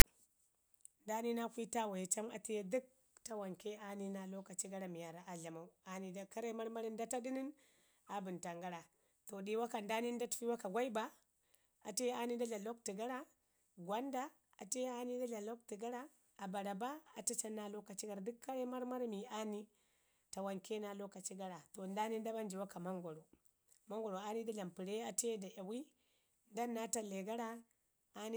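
It's a speech clip, and right at the top, from 0.00 to 0.04 s, there's a short, hard-edged burst: file tags played as audio. The tag text comes out as a loud, lopsided rasp, and the zero padding after it drops to silence before the speech begins.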